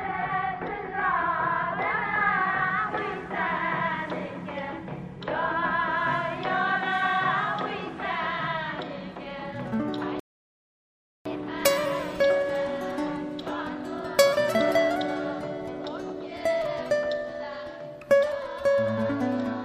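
At 10.20 s the player runs dry of downloaded audio and halts, a rebuffering stall that lasts until 11.26 s. Playback has outrun the incoming data, so the output drops to silence and waits for more to arrive. When it resumes, it picks up at exactly the point where it stopped, with nothing skipped. The sound simply freezes into a gap of about 1.06 s and then continues, stretching the total running time by that amount.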